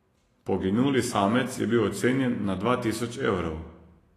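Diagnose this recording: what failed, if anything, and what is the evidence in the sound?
Throughout the speech the treble sounds hissy and grainy, consonant onsets are smeared, and nothing reaches above 14.1 kHz. This points to the codec stage, likely Vorbis compression at a low setting, around 34 kbps, where coarsely quantised high-frequency detail turns into noise-like residue.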